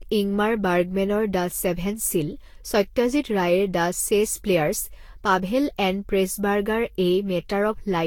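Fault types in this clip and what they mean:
Generation loss: The speech sounds swirly, smeared and hollow throughout, worse than a single encode at this quality would give. Consonant attacks blur and noise builds up. Nothing is heard above 18.9 kHz. The cause is likely repeated lossy re-encoding, with Vorbis decoded and encoded again about seven times. Each pass requantises on a shifted frame grid, so errors and spectral holes build up. The character points to rates near 72 kbit/s.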